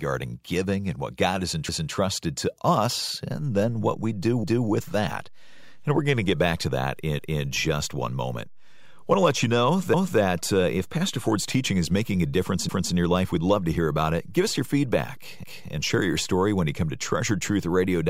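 Speech with overlapping chunks: at 4.44, 7.19 and 12.69 s, about 0.25 s of audio plays twice, heard as a brief stutter. Each roughly 2.5 s chunk begins before the previous one finished, so the overlapping stretch is repeated at the join.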